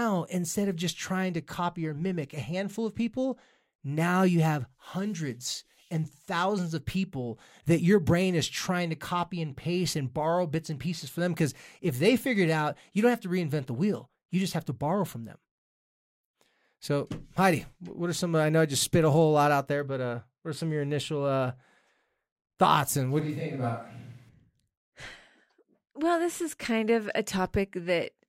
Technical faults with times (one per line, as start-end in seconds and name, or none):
23.20-24.29 switch to a distant microphone